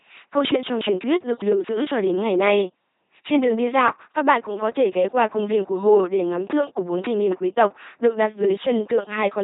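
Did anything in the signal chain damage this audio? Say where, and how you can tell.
Yes, at the codec stage: the speech has been through an LPC-10 vocoder throughout, with heavy damage. It sounds buzzy and robotic, consistent with 2.4 kbit/s coding. A spectrogram shows nothing above 3.8 kHz, rigid pulse-train harmonics in voiced frames, and buzz or hiss wherever voicing is misjudged.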